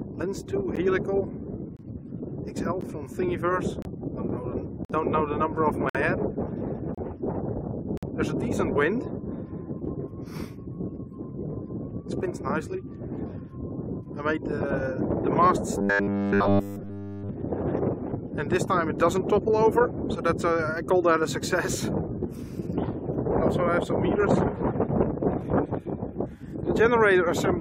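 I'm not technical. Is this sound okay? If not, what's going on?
No. First, there is a gap between stream segments. The audio arrives in one-second pieces whose timing doesn't quite line up, so the player inserts tiny silences, heard as short hard dropouts at 0.76, 1.77, 2.81, 3.82, 4.85, 5.89, 6.95 and 7.97 seconds.

Second, from 15.78 to 17.29 seconds the sound turns into a flat, metallic buzz. This is likely robotic sound from repeated short buffers: new audio came too slowly, so the software kept replaying a tiny slice, giving a steady 100 Hz drone.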